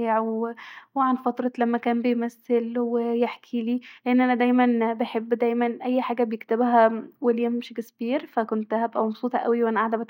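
A speech recording with nothing technically wrong with it.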